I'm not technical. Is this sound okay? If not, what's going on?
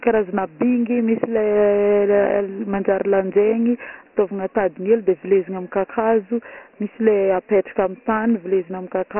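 No. From start to end, the speech sounds muffled, thin and telephone-like, with a gritty hiss trailing it. This is heavy Dialogic VOX ADPCM damage, a phone-system format that keeps only a rough 4-bit sketch of the sound and cuts everything above 3 kHz.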